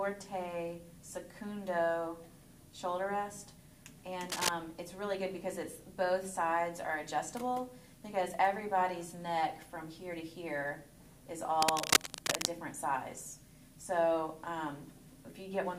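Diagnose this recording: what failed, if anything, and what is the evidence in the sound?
Analogue wiring trouble: there's cable scratch noise, bursts of rough scratching from 4.29 to 4.49 s, roughly as loud as the sound itself, then from 11.62 to 12.47 s, a bit louder. Likely a worn cable or connector being moved, its contact resistance jumping around.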